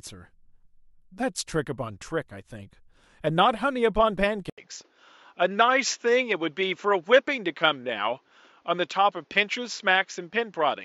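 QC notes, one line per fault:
4.50–10.84 s input switched to a poorer device: after an 80 ms gap, speech loses everything above 7.4 kHz and gains faint background noise; likely a narrower-band microphone.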